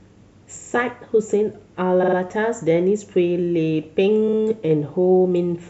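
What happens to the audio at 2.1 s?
Between 2.02 and 2.16 s the speech stutters from repeated frames: a 46.4 ms block of compressed audio is decoded three extra times, replaying the same instant back to back and stretching the clip by about 139 ms.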